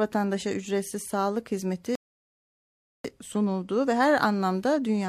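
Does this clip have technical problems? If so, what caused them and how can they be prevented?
Yes. The player's buffer ran dry, causing a rebuffering stall from 1.95 to 3.05 s: the speech drops to silence, then resumes exactly where it stopped, adding 1.09 s. Preventing it means buffering more audio ahead before playback or adapting to a lower bitrate when the connection slows.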